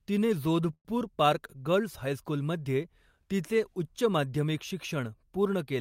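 Speech with a call audio freeze at 0.73 to 0.88 s, likely from delayed packets draining the jitter buffer: the last sound stretches into a fading buzz, then about 60 ms of silence, before "पार्क गर्ल्स हायस्कूलमध्ये तिचे" resumes intact, 115 ms late.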